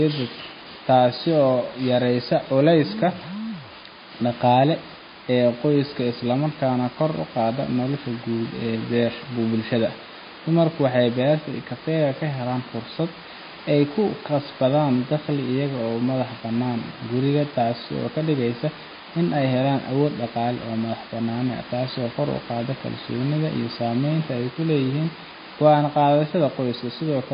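MP3 compression, throughout the speech: nothing above 5 kHz, with watery, swirling artefacts and smeared attacks, likely from a starved bitrate near 24 kbps zeroing weak frequency lines.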